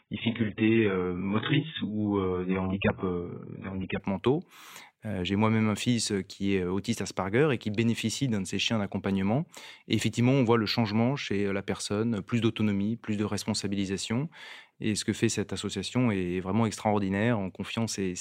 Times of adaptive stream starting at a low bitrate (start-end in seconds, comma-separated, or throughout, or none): 0.00-4.00